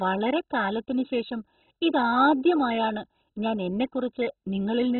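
Throughout, likely heavy MP2 compression at a very low bitrate has shut off every sub-band above 4.1 kHz, leaving the speech dull, gurgling and coarsely granular.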